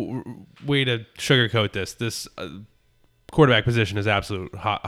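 At 2.91 s the speech has a dropped buffer (overrun): a jump in the sound where only a few milliseconds of audio are missing. The likely cause is the software reading its samples too late, so the hardware overwrote them. The two sides join directly, with no silent gap as a dropout would leave.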